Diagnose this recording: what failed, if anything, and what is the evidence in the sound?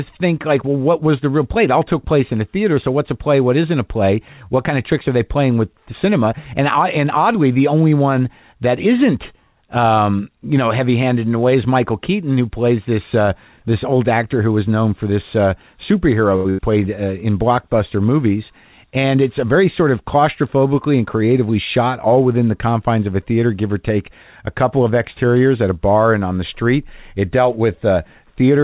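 The network/jitter-buffer stage failed. At 16.36 to 16.48 s there is a short stall from a late packet: the speech is held for about 85 ms with a faint buzz or dip while the buffer sits empty, then resumes from the same point with nothing lost.

Right after, at 16.50 to 16.61 s, a burst of packet loss follows. The receiver conceals about 85 ms by extending the last sound and letting it fade. When the audio picks up again, roughly 80 ms of speech has been skipped.

From 18.50 to 19.80 s, the jitter buffer speed-up drains the delay that built up. Short pitch-period pieces, around 70 ms in total, are cut out, so the speech runs at 105% speed with unchanged pitch and sounds slightly rushed. The call path is band-limited at 4 kHz.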